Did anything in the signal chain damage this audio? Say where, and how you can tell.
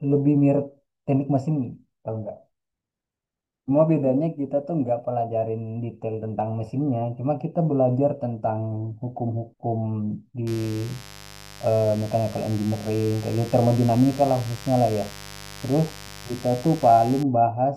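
Yes. From 10.47 s to 17.23 s a steady, raspy mains buzz sits under the speech at roughly 20 dB below it, edged rather than a smooth hum. That texture places the damage in the analogue wiring. Its fundamental is 50 Hz, and the sharp spikes from something like a dimmer, rectifier or unshielded run, arriving twice per mains cycle, spread harmonics of 50 Hz up into the kilohertz range, which is what gives the buzz its rasp.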